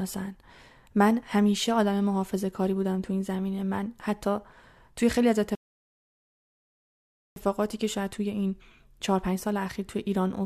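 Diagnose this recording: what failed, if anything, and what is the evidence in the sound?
At 5.55 s the speech drops to silence and stays there until 7.36 s, then picks up at the exact point where it broke off, with nothing skipped or repeated. That is a rebuffering stall at the playback stage: the player drained its buffer of downloaded audio faster than new data arrived from the network, so it paused output and waited. No audio is lost, but the stall inserts 1.81 s of dead time into the clip.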